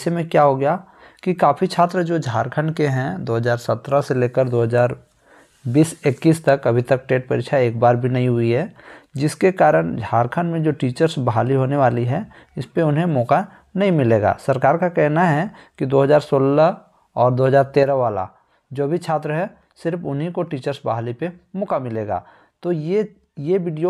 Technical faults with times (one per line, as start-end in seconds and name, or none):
17.83-23.90 one channel drops out